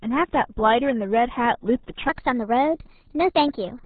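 From the start the speech carries the RealAudio 14.4 codec's heavy damage: at about 8 kbit/s, the low-rate modem-era codec discards everything above 4 kHz and coarsely models what remains, so the voice sounds muffled and gargly. On a spectrogram the energy stops at a hard ceiling near 4 kHz, with smeared, blocky harmonics beneath it.

At 2.09 s, and through to the end, a section plays at the wrong speed, 1.19 times too fast, so pitch rises about three semitones and delivery turns hurried. Likely cause is a resampling or clock mismatch. A spectrogram shows harmonics stepping upward there; the waveform's syllables compress.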